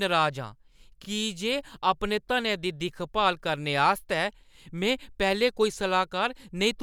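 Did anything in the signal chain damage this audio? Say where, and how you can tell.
Yes: repeated frames at 1.04 to 1.07 s. A 32 ms block of the speech plays twice in a row, a brief stutter that adds 32 ms to the clip. That length fits a single compressed frame being duplicated at the codec or storage stage before decoding.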